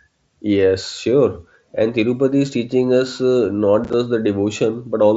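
A brief stretch of speech broken by short holes with abrupt edges runs from 3.84 to 3.94 s, just after "is teaching us uh". It is unconcealed Bluetooth headset packet loss: about 30 ms of audio dropped out in holes no longer than 7.5 ms, scattered across 90 ms, which points to a few lost packets on the headset link. Silence or an idle pattern filled each gap, leaving hard edges. The audio was carried over the wideband mSBC headset codec.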